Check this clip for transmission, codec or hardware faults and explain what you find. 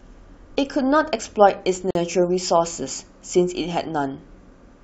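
One fault turns up in this speech clip. At 1.91 to 1.95 s there's a gap at a join of encoded pieces: separately encoded pieces of about 4 s were butted together untrimmed, so encoder delay and end padding leave a silence of about 45 ms with smeared edges before the speech resumes.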